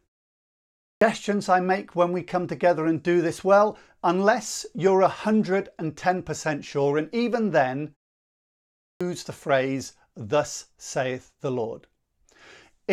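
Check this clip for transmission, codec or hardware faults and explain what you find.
The clip has one fault: a clipped start after a pause, heard twice. The first runs from 0.41 to 1.01 s, just before "I make when we", after 0.41 s of silence. The second runs from 8.38 to 9.01 s, between "sure and even then" and "the phrase", after a 0.5 s pause. The output device sleeps during silence and needs time to wake. Each time about 0.6 s of speech is swallowed, so the speech jumps in abruptly without its opening sounds.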